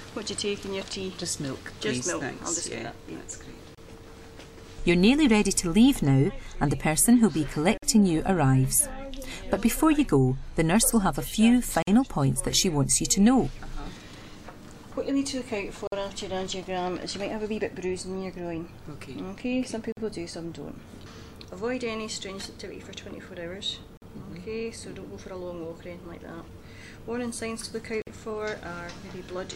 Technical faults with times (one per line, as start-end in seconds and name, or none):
3.75-3.78 gap at a join of encoded pieces
7.78-7.82 gap at a join of encoded pieces
11.82-11.87 gap at a join of encoded pieces
15.87-15.92 gap at a join of encoded pieces
19.92-19.97 gap at a join of encoded pieces
23.97-24.02 gap at a join of encoded pieces
28.02-28.07 gap at a join of encoded pieces